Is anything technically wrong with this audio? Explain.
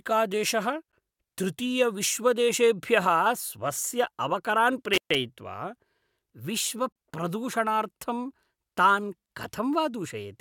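Yes, two kinds of problem turn up in this speech clip.

There's a gap between stream segments at 0.92 s and again at 6.92 s. Two segment timestamps don't quite meet, so the player pads with silence: a hard-edged hole of about 13 ms the first time and 32 ms the second. Those two holes sit 6 s apart, which fits 6-second segments, and no audio is actually missing.

Then at 4.93 s there's an intermittent contact, running to about 5.15 s. A loose plug or cable briefly opens, so the sound drops out for roughly 128 ms with crackle at the edges of the dropout, which points to a physical connection rather than anything in the stream.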